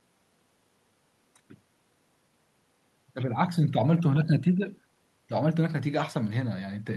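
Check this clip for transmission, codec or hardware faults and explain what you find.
Nothing here points to a transmission, codec or hardware problem; the speech comes across as you'd expect from a normal call link, with the top end easing off around 12 kHz, which fits an Opus connection running at a comfortable bitrate.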